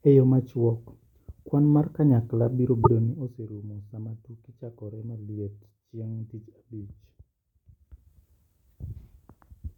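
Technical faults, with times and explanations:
2.80–2.87 s, damaged data in a compressed stream: a brief glitch of about 75 ms, where corrupted bytes make the decoder misread frames and lose sync until the next frame header.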